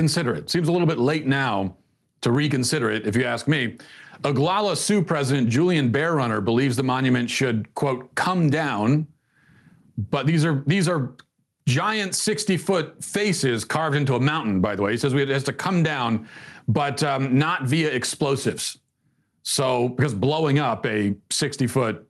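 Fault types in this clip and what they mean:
Gain pumping, throughout: the level breathes with the speech, a swing of around 10 dB. The likely cause is input gain set far too high for the microphone, so a fast limiter or compressor keeps clamping down on peaks and releasing in the gaps. This squeezes loud and quiet passages toward one level and leaves the sound squashed.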